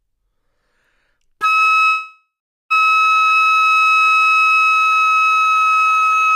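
At 1.85 s a call audio freeze begins and lasts to 2.72 s. The last sound stretches into a fading buzz or hiss, then 420 ms of silence. Delayed packets likely drained the jitter buffer. The sound resumes where it stopped, 850 ms late, with nothing lost.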